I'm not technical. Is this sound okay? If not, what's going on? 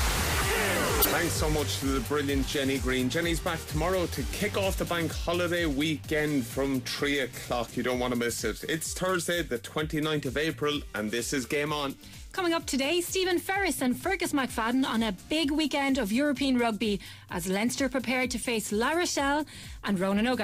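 No, there are four brief glitches, each a corrupt frame decoded. The audio is stored as small compressed chunks, and a few of those chunks got scrambled but were played anyway, so each one comes out as a short chirp or burst of noise. They happen at 0.99 to 1.07 s (the loudest), 2.73 to 2.78 s, 12.13 to 12.15 s (very faint) and 18.39 to 18.46 s. Each lasts well under a tenth of a second.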